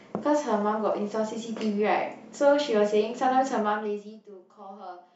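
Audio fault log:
No faults heard.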